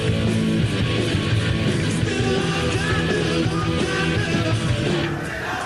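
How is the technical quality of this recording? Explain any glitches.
The technical quality of the recording is sound, with no glitches to explain.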